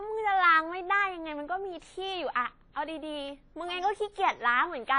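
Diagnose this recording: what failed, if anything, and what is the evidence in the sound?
WMA compression is heard throughout the speech, a codec-stage fault. The sound rings and smears, with hiss that swells and fades with the signal, and nothing reaches above 10.1 kHz. This likely comes from a transform encoder whose long blocks spread quantisation noise in time and whose starved bit budget, fitting roughly 32 kbps, discards weak components.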